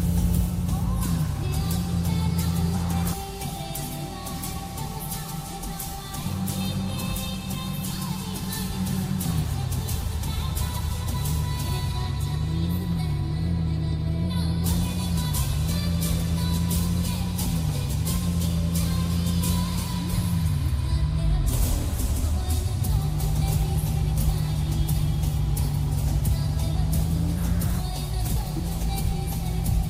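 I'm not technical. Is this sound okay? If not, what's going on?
Yes, nothing in this recording points to a technical problem, so the sound can be taken as it is.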